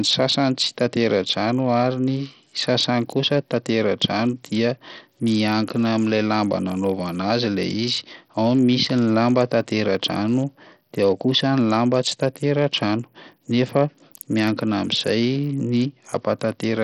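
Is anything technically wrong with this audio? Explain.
Yes. Throughout the speech there is heavy, gritty coding damage, likely from Bluetooth SBC compression at a starved bit pool, pointing to roughly 64 kbps. Sub-bands short of bits leave flickering, patchy treble, quantisation grit and aliasing, seen on a spectrogram as blotchy high bands and nothing above 19.4 kHz.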